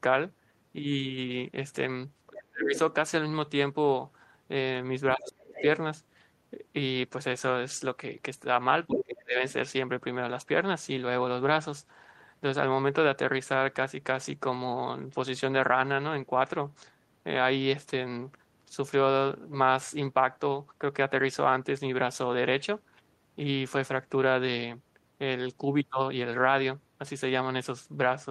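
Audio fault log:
2.29–2.75 s, 5.16–5.56 s, 8.87–9.42 s: speech suppressed in double talk. In each window the talker's voice sinks sharply, by roughly 30 dB or more, for about half a second, then recovers. This is likely an echo canceller that could not tell near speech from loudspeaker echo while both sides spoke, and so attenuated everything.
5.53–5.62 s, 8.94–9.04 s: other side's voice leaking through. Brief scraps of a second, far-end voice, each about a tenth of a second long, surface in the talker's channel. The first sits well below the talker and the second is nearly as loud. The likely cause is residual loudspeaker echo escaping cancellation. Unlike the ducking beside them, these are added sound from another source, not a loss of the talker's own voice.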